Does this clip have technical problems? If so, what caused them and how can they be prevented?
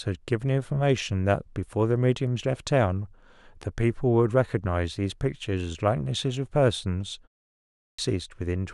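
Yes. At 7.53 s, after a short pause of 0.34 s, the speech resumes abruptly out of silence with its opening sounds missing. Roughly 0.45 s is swallowed, up to 7.99 s. This is a clipped start after a pause. The output device dropped into a low-power or idle state during the brief gap and had to wake or relock before it could play again, so the first part of the returning speech was lost. Keeping the output stream active through silences, or disabling the device's idle power-saving, would prevent it.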